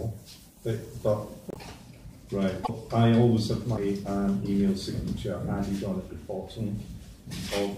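A broken MP3 bit reservoir is the likely cause of two brief disturbances, from 1.50 to 1.57 s and from 2.63 to 2.70 s. Each spans roughly three 26.1 ms frames. The audio lurches ahead, and the frames right after each gap decode as a garbled chirp, a burst of noise or a short hole because they pull borrowed bits from the wrong frame's data.

A CD skip occurs at 3.77 s. The player mutes for only a few milliseconds, heard as a tick or short gap, and then resumes from a different point on the disc's spiral, so the sound jumps discontinuously.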